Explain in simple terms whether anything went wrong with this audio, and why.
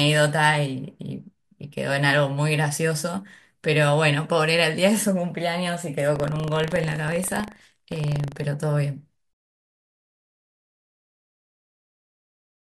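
Between 6.12 and 8.48 seconds, the program filling the audio buffer and the hardware reading it slipped out of step, causing buffer tearing. Each cycle, a tiny sliver of speech from a fraction of a second earlier gets spliced in, producing a robotic 25 Hz buzz over the voice.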